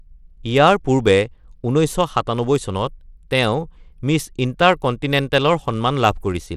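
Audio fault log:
Throughout, Bluetooth SBC compression: the speech carries plainly audible codec damage and has nothing above 15.8 kHz, which fits an SBC stream near 96 kbps, likely too few bits to cover the top sub-bands and enough only for coarse quantisation of the rest.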